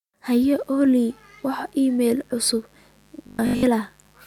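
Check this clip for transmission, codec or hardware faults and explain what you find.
Two faults are present: mains buzz and a robotic stretch.

Mains buzz starts at 0.53 s and runs to the end. Switching spikes from a dimmer, rectifier or unshielded line enter twice per 50 Hz cycle. They leave a steady, raspy buzz with harmonics reaching into the kilohertz range. It sits around 40 dB below the speech.

From 3.27 to 3.63 s the speech turns robotic. The likely cause is repeated short buffers. New audio arrived too seldom, so roughly 20 ms chunks were replayed while most of the real audio was skipped. This imposes a rigid, metallic 50 Hz buzz that loosely tracks the speech.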